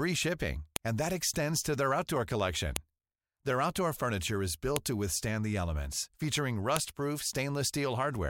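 Sharp clicks at 0.76 s just before "and that extends to", 2.76 s after "to their outdoor collection", 4.76 s, and 6.77 s after "withstand the elements featuring" are a file header played as audio, where the header bytes of each 2 s speech piece were rendered as samples.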